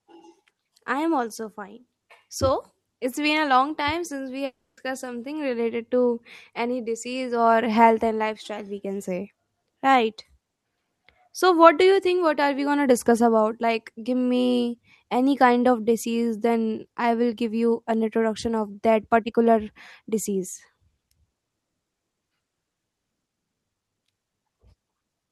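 Speech recording with a long network dropout from 4.45 to 4.79 s, likely caused by lost packets. About 0.32 s of audio is missing, and the last sound smears into a fading buzz or hiss. Roughly 0.26 s of near-silence follows, seen as a blurred band, then a blank gap in the spectrogram.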